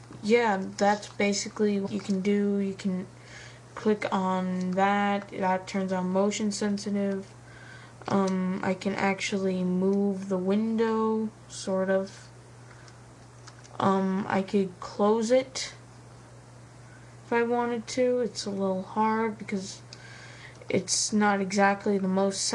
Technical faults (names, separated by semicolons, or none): compressed frames skipped